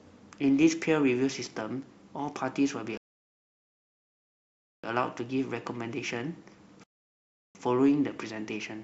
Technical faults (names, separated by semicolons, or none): rebuffering stall